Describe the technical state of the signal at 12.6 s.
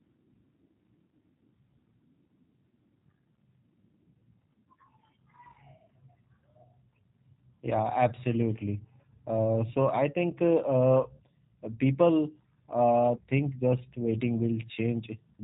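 At 12.6 s the speech carries G.729 codec damage, present across the whole clip: every 10 ms frame is rebuilt from a vocal tract filter, pitch predictor and sparse pulses, giving a rough, synthetic edge. A spectrogram shows a hard ceiling at 4 kHz, fitting an 8 kbit/s VoIP stream.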